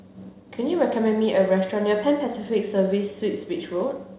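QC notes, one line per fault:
No faults to note for this speech clip.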